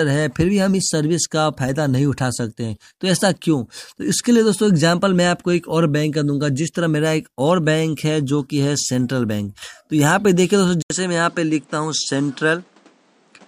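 At 10.82 s an 80 ms gap, then duller sound cut above 9.8 kHz with new faint background noise, about 35 dB down and at similar level: likely an input switched to a poorer device, not mere filtering.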